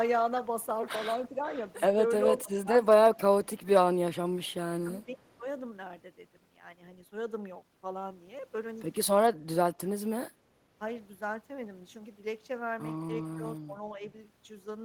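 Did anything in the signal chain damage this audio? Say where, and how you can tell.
Yes. The speech dips in level at 1.33–2.69 s (down about 15 dB at worst), 5.05–5.45 s (about 10 dB), 9.32–9.57 s (a deep 30 dB cut) and 13.4–14.0 s (a slight 5 dB). This is likely speech suppressed in double talk: during call processing, the echo canceller attenuated the near talker along with the far side.

From 3.63 to 5.35 s a faint copy of the speech trails it by 396 ms, roughly 40 dB down. This is likely an echo leak: call processing on a loudspeaker endpoint let some of the microphone's pickup of the far voice through, and it returned delayed.

At 10.33–10.7 s the room tone sinks by about 6 dB for under half a second, then comes back. This is background gated by the echo canceller: in call processing, the canceller ducked the microphone hard while the loudspeaker played, taking the ambience down with it.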